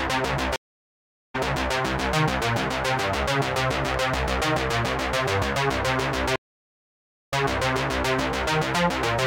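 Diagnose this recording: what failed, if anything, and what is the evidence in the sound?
Stream reconnect at 0.56 to 1.74 s and 6.36 to 8.13 s, a network-stage failure. The link dropped, leaving silences of 0.78 s and 0.96 s. A fresh decoder then restarted mid-stream from a resent burst, so the sound fades back in repeating about 0.4 s and 0.81 s of earlier audio.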